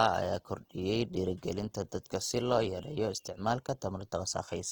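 From start to end, the speech carries plainly audible codec damage, likely from Opus compression running in its music (CELT) mode at a low rate; the sound fits roughly 16 kbps. With so few bits, bands are kept by folding lower content upward or filling with noise rather than left empty, so voiced sounds turn grainy and rough instead of swirling. A spectrogram shows energy reaching about 20.2 kHz, but the upper bands look smeared and noisy, with blurred harmonics.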